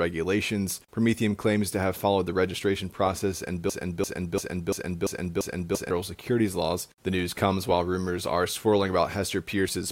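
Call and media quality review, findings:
Broken-record loop, 3.70–5.91 s, after "the registration process and". A 0.34 s fragment repeats six times back to back. Likely a stalled player or stream resending its last buffer. Audio resumes at "securities laws".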